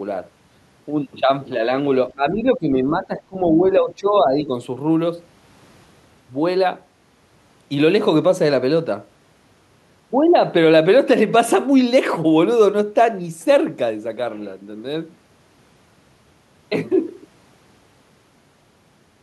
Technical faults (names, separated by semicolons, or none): speech suppressed in double talk